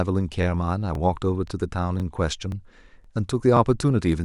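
The speech has overlapping chunks. It was cut into half-second pieces that each start slightly before the previous one ended, so about 23 ms replays at every join. You get a quick stutter-click at 0.43, 0.95, 1.48, 2.00, 2.52, 3.04 and 3.57 s.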